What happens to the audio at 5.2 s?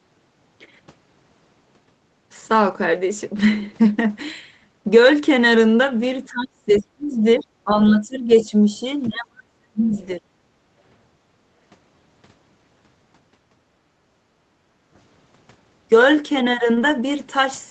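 Nothing goes wrong at 5.2 s: the speech there is intact, with no dropout, click or distortion at that moment.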